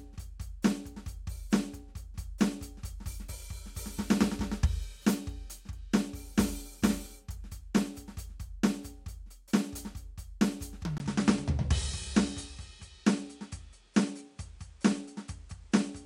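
An input switched to a poorer device at 10.98 s, likely: after a 20 ms gap the music loses everything above 10.6 kHz and turns duller, with a faint new noise floor well beneath it and no obvious change in loudness through the end.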